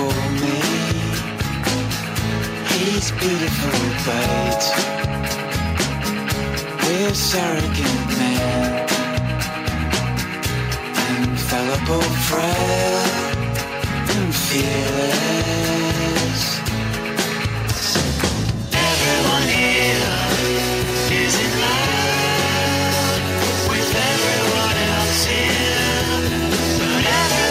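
No technical faults can be heard anywhere in the signal; it stays continuous and steady throughout.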